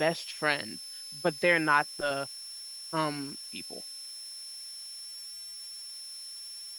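A switching supply whistle sits under the speech throughout, a high tone wandering between 5.27 and 5.50 kHz, roughly 15 dB below the voice, from a power supply running in an audible burst mode or beating with another supply.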